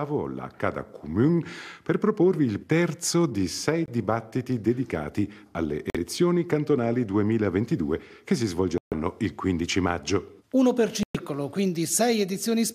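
Flipped bits in the compressed stream made the decoder reject frames, which were replaced with silence, a corrupt frame muted fault. The sound cuts abruptly to nothing at 3.86–3.90 s and 5.90–5.96 s, short holes consistent with two lost frames, then longer at 8.78–8.93 s and 11.03–11.17 s, with timing kept.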